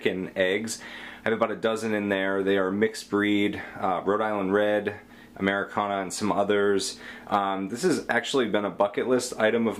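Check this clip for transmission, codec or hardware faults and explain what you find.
No transmission, codec or hardware fault can be heard anywhere in the clip.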